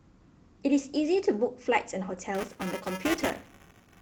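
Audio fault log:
2.35 s to the end, buffer tearing: a steady robotic buzz at 375 Hz rides on the speech, which fits a 128-sample buffer whose writer and reader have slipped and now cross inside every period. In each period a small slice, roughly a tenth, repeats audio from several milliseconds earlier, with a hard join at both edges. Unlike scattered clicks or dropouts, the rattle is strictly periodic and present only while there is signal.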